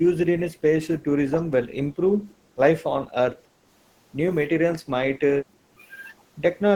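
The speech dips six times: 0.0 to 0.79 s, 0.96 to 1.51 s, 1.88 to 2.57 s, 3.08 to 3.13 s, 3.34 to 3.68 s and 5.38 to 5.81 s. Each is speech suppressed in double talk. The level sinks and recovers. The deepest drops come early, near 15 to 20 dB. Later ones are shallower, closer to 5 or 10 dB. The likely cause is an echo canceller turning down the near talker while the far side speaks.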